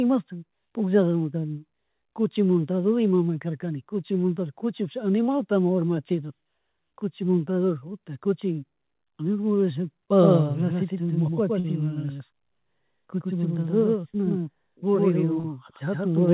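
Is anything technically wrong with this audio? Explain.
Yes, there are two kinds of fault in this speech.

A doubled audio track starts at 10.21 s and runs to the end. A second full-band copy of the speech trails by about a tenth of a second at roughly equal level, with no decay or room colour. It is likely a slower second capture path or misaligned edit, and it produces a hard, slapback-style echo that starts abruptly.

Short concealed packet loss occurs at 11.60 to 11.67 s and at 15.40 to 15.47 s. In each, about 40 ms of audio never reached the decoder in time, so the receiver extended the preceding sound and crossfaded back. It is heard as a brief smear or wobble, and a short consonant can drop out.

Both faults sit within a G.711 call path whose band ends at 4 kHz.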